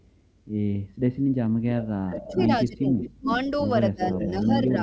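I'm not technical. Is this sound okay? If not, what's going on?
No. Two problems can be heard.

The first is an echo leak. A delayed copy of the speech comes back, about a quarter to a third of a second late. It is faintest at the very start, near 0.0 s. It is clearer from 1.78 to 2.44 s, from 3.01 to 3.4 s, and from 4.02 s to the end. The likely cause is a loudspeaker on one end of a call. Its echo blocker let part of the sound through.

The second is speech suppressed in double talk. From 2.07 to 3.29 s, and again from 3.67 s to the end, the main speech dips noticeably quieter in patches. That happens while the other side's voice is also playing on the loudspeaker. The echo blocker likely could not tell the two apart, so it turned both down.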